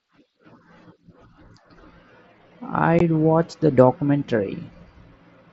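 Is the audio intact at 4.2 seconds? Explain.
Yes, the speech is intact at 4.2 seconds, with no fault at that moment.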